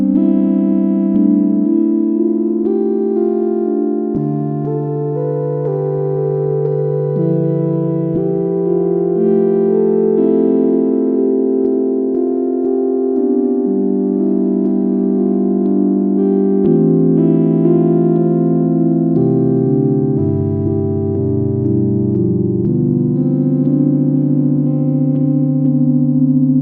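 No technical faults can be heard anywhere in this recording of sounds.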